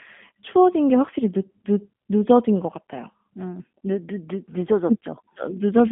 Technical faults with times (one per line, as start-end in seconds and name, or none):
0.00-5.91 G.729 codec